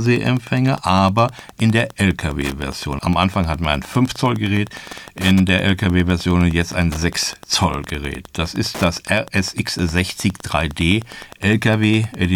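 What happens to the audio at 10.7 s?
At 10.7 s the speech carries Wi-Fi interference, present throughout the clip. A nearby radio's beacon, every 102.4 ms, is rectified by the audio circuit, giving a ticking about ten times a second, roughly 20 dB below the speech. A spectrogram shows evenly spaced vertical broadband stripes, and the waveform shows regular small spikes.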